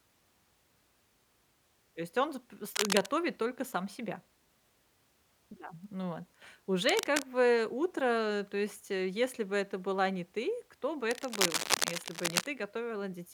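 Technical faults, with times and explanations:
2.71–3.07 s, 6.89–7.22 s and 11.10–12.49 s, cable scratch noise: three bursts of dense, ragged scratching sit over the speech. The first and last are roughly as loud as the speech itself, and the middle one is a little softer. The longest, near the end, runs well over a second. It's likely a worn cable or connector being moved, so the contact resistance jumps around and lets uneven bursts of noise into the signal.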